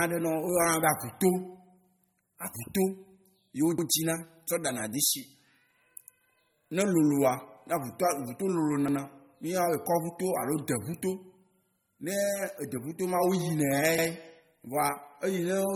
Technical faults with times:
0.00-15.75 MP3 compression
3.78-3.88 overlapping chunks
8.88-8.98 overlapping chunks
13.98-14.08 overlapping chunks

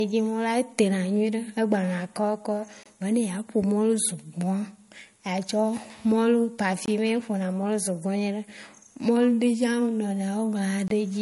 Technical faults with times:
0.00-11.21 low-bitrate audio saved at a high bitrate
2.83-2.86 gap between chunks
6.86-6.88 gap between chunks
10.88-10.90 gap between chunks

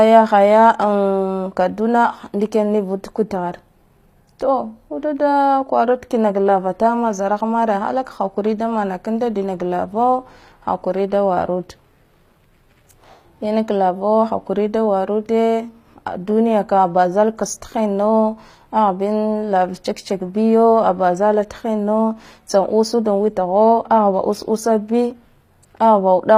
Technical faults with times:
0.00-26.37 HE-AAC compression

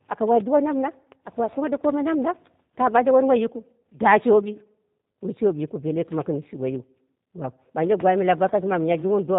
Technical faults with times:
0.00-9.38 G.729 codec

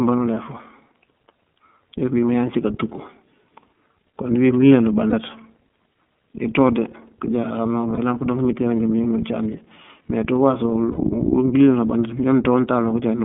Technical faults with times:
0.00-13.25 iLBC codec
5.10-5.14 lost iLBC frames
7.94-7.99 lost iLBC frames
10.91-10.98 lost iLBC frames

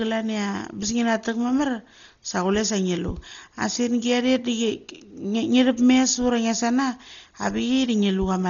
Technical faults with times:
0.00-8.49 Dolby Digital compression

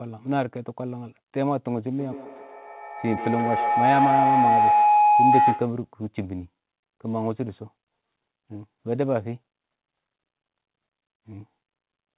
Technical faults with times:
1.97-5.91 feedback howl

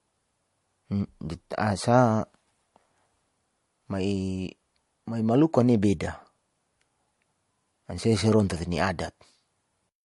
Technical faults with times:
0.00-10.04 transcoding between lossy codecs

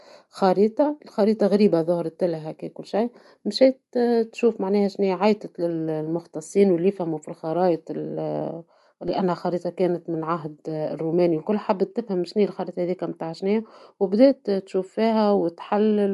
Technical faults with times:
0.00-16.14 Bluetooth LC3 compression
9.08 DC step

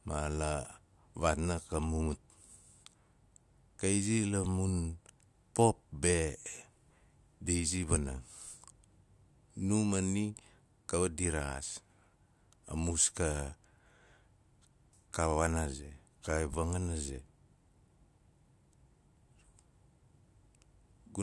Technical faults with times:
none

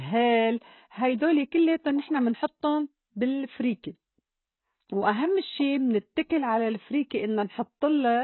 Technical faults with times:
0.00-8.24 AAC compression

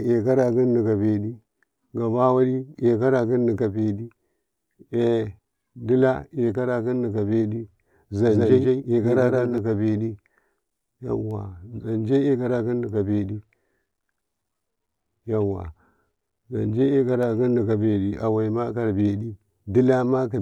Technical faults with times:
8.26-9.58 doubled audio track

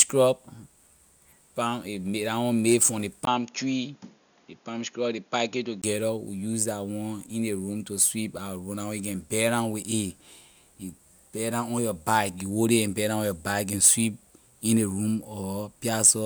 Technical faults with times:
3.25-5.84 input switched to a poorer device

